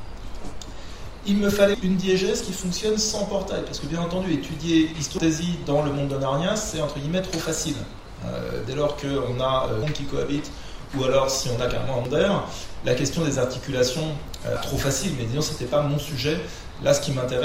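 Short chirps, squawks or blips break through the sound at 1.74 s, 5.18 s, 9.82 s, 12.05 s and 14.56 s, each one brief and abrupt. These are signs of damaged data in a compressed stream: at each point some bytes of the encoded file were lost, zeroed or overwritten. The decoder misreads the affected frames, loses its place in the stream and has to hunt for the next valid frame header before normal playback resumes.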